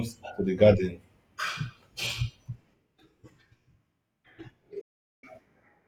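At 4.81 s the receiver stops getting valid frames, a digital broadcast dropout, and mutes until good data returns at 5.24 s. The speech fades out over about 8 ms into roughly 0.42 s of silence, which fits around thirteen lost frames, and the missing speech never comes back.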